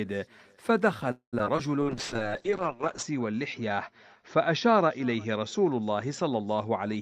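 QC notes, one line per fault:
1.11–1.35 s, call audio freeze: the sound stalls for about 0.21 s. The last sound is carried on and fades, then about 0.11 s of silence follows before playback resumes from where it stopped. This is likely a jitter buffer running empty while packets were held up in transit. Nothing is lost. Instead, 213 ms of gap is inserted and the playout delay grows by the same amount.
1.39–1.41 s, 1.45–1.48 s, 1.56–1.59 s, short concealed packet loss: three brief smears in quick succession after the freeze. The decoder missed 20 ms, 40 ms and 20 ms of audio respectively and filled each hole by extending the preceding sound before blending back into real audio. The fills run about 5, 9 and 13 ms. The second event also pulls the playout delay back by roughly 30 ms.
1.82 s to the end, call bitrate drop: the encoder rate falls from 32 kbps to 7 kbps after the bandwidth estimate collapses. 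Coding becomes coarser and the audio bandwidth narrows from 20 kHz to 8 kHz, so the sound turns audibly muffled. It stays at the lowest rate for about 1.17 s and does not return to the original quality before the clip ends.
1.84–2.29 s, jitter buffer slow-down: playback runs at 91% speed with pitch unchanged, stretching the sound by 50 ms in total. The receiver builds reserve by repeating single pitch periods or fragments of pauses many times in a row, which draws sounds out without lowering them. This overlaps the start of the bitrate drop.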